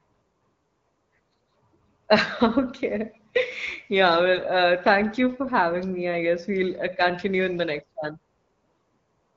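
From 4.36 to 4.48 s, just before "uh thank you for", AMR bit errors scramble a few percent of the less protected bits. The sound turns scratchy and gargly while keeping its pitch and level, with no gap like lost frames would leave, across the light AMR-WB coding.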